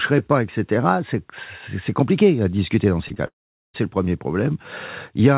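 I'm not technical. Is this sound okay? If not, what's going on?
No. At 3.08 to 3.12 s and again at 3.14 to 3.18 s there are two cases of short concealed packet loss: about 20 ms of the call each time never arrived, and the receiver papered over the gap by continuing the last sound, heard as a quick smear or wobble.

From 3.26 to 3.76 s the sound gives way to a fading buzz or hiss, then goes quiet for roughly the last 420 ms of that stretch before resuming with half a second missing. That points to a likely long network dropout, where the connection delivered nothing for that stretch. The narrow, phone-like tone, with nothing above 4 kHz, comes from the ordinary call line.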